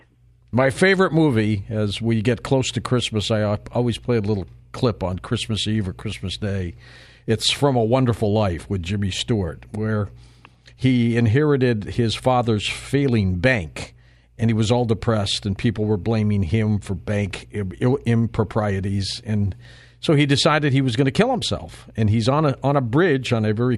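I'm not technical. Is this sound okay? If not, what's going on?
Yes, nothing stood out as wrong when listening to this recording.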